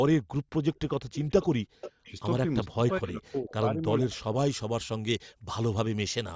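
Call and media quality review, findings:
Echo leak, 0.73–0.80, 1.13–1.46, 1.81–2.12, 3.50–3.54 and 4.13–4.20 s. Faint delayed copy of the speech, trailing by 418 ms in the first scrap and 449 ms after that. Level ranges from about 35 dB to roughly 15 dB under the talker, loudest at 1.81 s. Likely far-end loudspeaker pickup not fully removed by that side's echo canceller and returned down the line. Scraps are short.

Background gated by the echo canceller, 1.62–2.05 s and 5.33–5.46 s. Room tone dips by about 40 dB, for roughly 0.3 s in the first window and 0.15 s in the second, then recovers. The echo canceller clamps the mic hard while the loudspeaker plays and releases when playback stops.

Speech suppressed in double talk, 2.67–4.13 s. Talker's level falls by up to roughly 30 dB across about a second in total, broken into pieces. Likely both sides talking together, with the echo canceller unable to separate near speech from loudspeaker echo and attenuating both.

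Pre-emphasis left on, 4.36–6.35 s. Treble too strong, following an FM 50 µs curve that rises about 10 dB at 10 kHz relative to 1 kHz, though the audio itself stops at 8 kHz. The boost was applied without the matching de-emphasis, so this section sounds thin, bright and sibilant.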